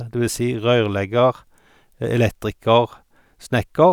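A short speech recording with nothing technically wrong to report; the signal holds steady throughout with no audible faults.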